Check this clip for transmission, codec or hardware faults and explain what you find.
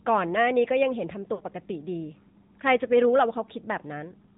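Two faults are present: narrowband mobile coding throughout the speech, and a short dropout from lost AMR speech frames.

The whole clip sounds thin and buzzy, with a plainly synthetic edge and nothing above 4 kHz. That is the AMR narrowband mobile codec. AMR-NB samples at 8 kHz and rebuilds speech from a vocal-tract model excited by a handful of pulses per subframe. The degree of buzziness here fits a mid-range mode around 10.2 kbps. At that rate the codec has too few pulses to carry a natural-sounding voice.

From 1.34 to 1.43 s the speech briefly stretches into a smeared, warbling tone that sags in level before normal sound resumes, sounding weak or rough for a moment. These are lost AMR speech frames: corrupted frames failed their check, so the decoder repeated the last good pitch and vocal-tract settings at decreasing gain. The gap is about 60 ms, which points to three consecutive 20 ms frames.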